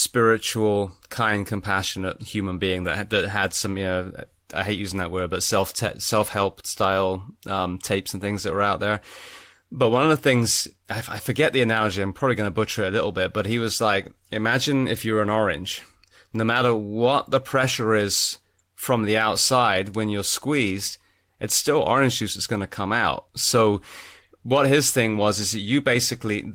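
No technical faults are audible in this speech.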